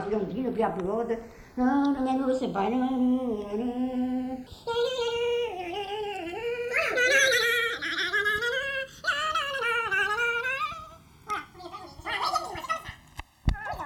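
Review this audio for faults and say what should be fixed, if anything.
Channels drifting apart affects the whole clip. The delay between left and right slides steadily, reaching about 2 ms by the end, which points to a clock mismatch of roughly 100 ppm. Summed to mono, the comb notches sweep slowly. A fixed offset would leave static coloration instead. Lock both devices to a shared word clock, or resample one channel against the other.

Section at the wrong speed runs from 4.47 s to the end. The audio plays 1.9 times too fast, and its pitch rises about ten semitones, most likely because an editor or player used the wrong clock rate. Pure pitch shifting would not change the timing, but here tempo and pitch rise together. Confirm the sample-rate setting wherever that section is imported and played back.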